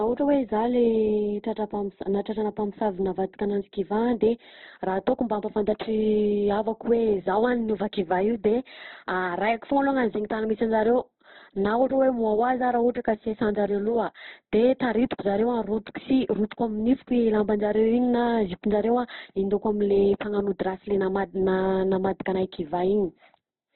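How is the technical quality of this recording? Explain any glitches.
The quality's pretty rough, and it stays that way for the whole clip. It sounds like likely Opus compression at a low rate, probably somewhere around 12 kbps in the music-style CELT mode. Nothing comes through above about 4.2 kHz, so it's squeezed down to narrowband and sounds boxed-in. The encoder keeps each band's overall energy but doesn't have the bits for real detail, so it patches the gaps with folded or noisy content. That's why the speech comes across grainy and rough rather than swirly.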